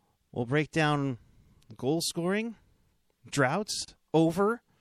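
Throughout the speech there is plainly audible damage of the kind MP3 compression leaves, likely from encoding at a low bitrate, which fits about 64 kbps. Weak frequency components flicker between frames, giving a watery, swirly texture, and consonant attacks are smeared.

From 3.85 to 3.88 s, a gap at a join of encoded pieces opens a 33 ms gap in the continuous sound. Separately encoded segments were joined without removing encoder start delay and final-frame padding. The edges are smeared, so the silent part is shorter than the gap, and the sound resumes where it stopped.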